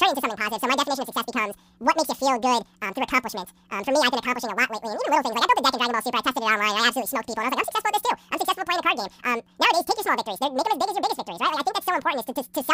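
Audio read two samples at a time (double speed) affects this speech clip from start to finish: each pair of samples is taken as one frame, so playback runs at 2.0 times the correct rate and pitch jumps an octave.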